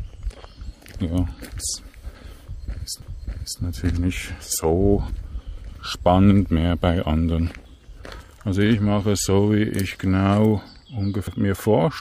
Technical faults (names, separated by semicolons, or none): CD skip